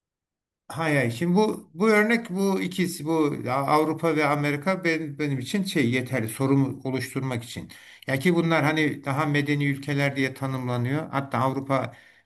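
No technical faults are audible.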